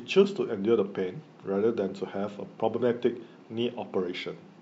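Speech recording with no technical faults to report.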